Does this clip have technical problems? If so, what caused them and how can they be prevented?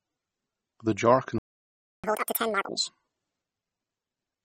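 Yes. The speech has likely been through MP3 compression at a low bitrate. The damage is plainly audible, which fits about 32 kbps. The encoder dropped weak detail, giving a watery sound. Encoding at a higher bitrate would prevent this.

A playback stall follows "jar can". The audio goes silent from 1.38 to 2.04 s, about 0.65 s. The player likely ran short of data or was blocked. It then resumed. A larger playback buffer would prevent this.

Catch-up at higher speed runs from 2.04 to 2.69 s. The player rushes its backlog at double speed. Pitch jumps by nearly an octave. Letting the player resume at normal speed, or absorbing the delay with buffering, would prevent this.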